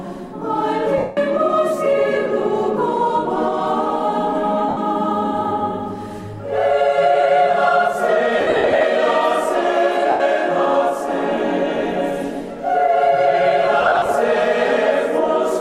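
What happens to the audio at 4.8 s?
Right around there, from 4.69 to 4.77 s, you get lost LE Audio frames. That's an 80 ms gap, which fits eight 10 ms LC3 frames going missing over the Bluetooth link. The decoder covers the hole by replaying the last good spectrum with randomised signs and fading it after the first few frames, so whatever tonal content was there blurs into a short, noisy smear that sags in level before the audio snaps back.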